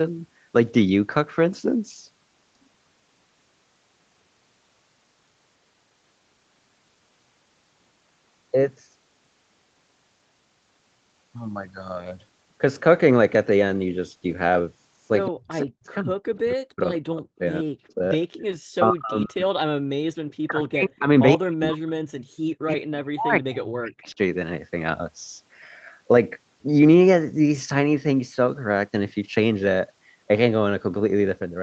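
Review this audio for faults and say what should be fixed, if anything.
From 15.3 to 18.02 s and again from 18.81 to 24.09 s, the speech dips and cuts out in pieces. The drops reach roughly 40 dB. About 1.5 s and then about 4 s are affected. This is speech suppressed in double talk. The likely cause is an echo canceller that could not tell the local talker from loudspeaker echo while both sides spoke, so it turned both down.

A delayed copy of the speech comes through at 17.88 to 18.41 s and at 21.35 to 21.65 s. It trails by 132 ms. The first is about 30 dB below the speech and the second about 15 dB below. This is an echo leak, likely loudspeaker sound that the canceller failed to remove and sent back.

From 18.3 to 18.43 s, the background sound drops out by about 40 dB for roughly 100 ms and then returns. This is background gated by the echo canceller. It clamped the microphone hard while the loudspeaker played.

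To prevent all three, use a headset instead of a loudspeaker, or tune the echo canceller for better double-talk handling and stronger residual echo removal.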